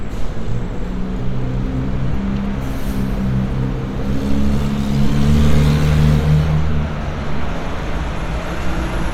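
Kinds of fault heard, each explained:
Lost LE Audio frames: at 2.07 to 2.14 s, about 37.5 ms of audio drops out in short bursts over 60 ms, with runs of roughly 15 ms at most. The LC3 decoder fills each gap by repeating the last spectrum with randomised signs, briefly smearing the sound into noise.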